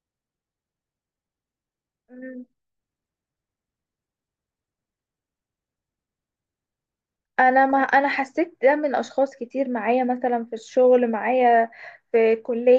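Nothing goes wrong anywhere in this recording of speech, so there's no technical fault to point to at any moment.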